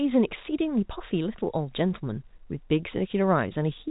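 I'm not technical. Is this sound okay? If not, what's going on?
Yes, nothing is wrong here; the speech simply has the narrow sound of an ordinary landline call, with nothing above roughly 3.8 kHz, which is normal for G.711 telephone coding.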